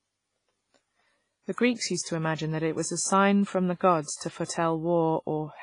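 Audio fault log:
throughout: WMA compression. The speech sounds washy and ringing, with a hiss that swells and fades along with it. Nothing is heard above about 10.3 kHz, so the top end is dull. Weak detail drops out and the damage is heavy. The likely cause is Windows Media Audio coding at a low rate, which fits about 24 kbps. Its long transform blocks smear the noise over tens of milliseconds, and the weakest frequency lines are zeroed.
4.02–4.49: pre-echo. A short hiss comes just before each of three sharp attacks, at 4.02–4.08, 4.16–4.21 and 4.45–4.49. The hiss runs 55 ms, 45 ms and 40 ms. Each attack landed late in a coding block. The coder spread its noise evenly across that block. Noise sized for the loud onset therefore also filled the quiet gap before it. The attacks sound softened and smeared.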